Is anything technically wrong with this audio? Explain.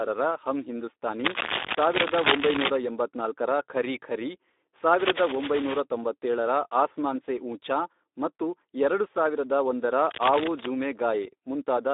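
Yes. The speech has two faults.

Speex codec damage runs through the whole clip. At about 11 kbps this CELP codec has too few bits for the excitation. The speech sounds noisy and hoarse. The band is narrow, about 250 Hz to 3.7 kHz, with nothing above 3.8 kHz.

Cable scratch noise appears three times: 1.25 to 2.76 s, ending just before "ಎಂಬತ್ನಾಲ್ಕರ ಖರೀ ಖರೀ"; 4.93 to 5.8 s, just before "ತೊಂಬತ್ತೇಳರ ಆಸ್ಮಾನ್ ಸೇ ಊಂಚಾ"; and 10.05 to 10.68 s, just after "ಮತ್ತು ಎರಡು ಸಾವಿರದ ಒಂದರ". Dense, uneven scratching bursts sit over the sound. They are about as loud as the speech, and about 5 dB louder in the first burst. The likely cause is a worn cable or connector being moved, so its contact resistance changes rapidly.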